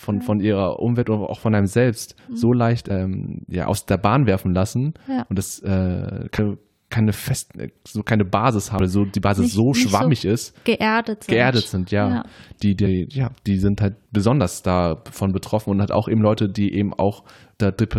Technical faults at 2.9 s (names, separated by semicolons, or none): damaged data in a compressed stream